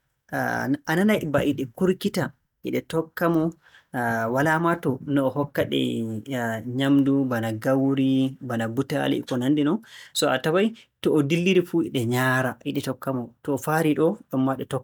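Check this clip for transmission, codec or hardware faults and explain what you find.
Nothing found: the speech shows no transmission, codec or hardware fault at any point.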